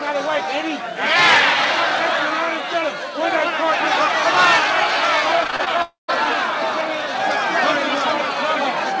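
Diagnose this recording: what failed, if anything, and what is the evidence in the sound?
Repeated packet loss (robotic sound) sits at the network stage, from 5.44 to 5.68 s. The audio turns choppy there. Five short holes appear in quick succession, the longest about 25 ms. Each one is patched by stretching the preceding sound, so roughly a third of that span is synthetic fill. The patches follow one another closely.

From 5.82 to 6.10 s the real sound stops. A fading continuation of the last sound runs for a short while, then about 0.14 s of near-silence follows before the audio resumes further on. Roughly a quarter second of material never returns. This is likely a long network dropout. The receiver extended the last sound while nothing arrived, then gave up and went quiet. The call path's G.722 band limit, with nothing above 8 kHz, applies throughout.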